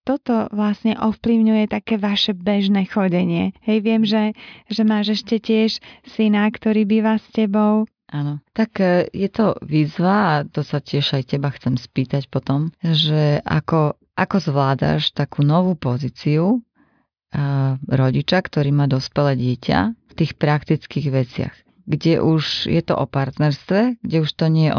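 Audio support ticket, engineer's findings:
No faults found in clip.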